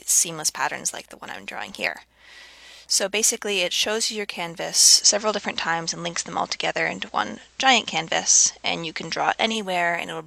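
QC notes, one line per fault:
4.94–9.58 s, digital radio blending to analogue: the receiver lost the digital stream and cross-faded over 108 ms to the station's FM broadcast, then returned. The level shifts by about 3 dB, and faint hiss appears, roughly 35 dB down.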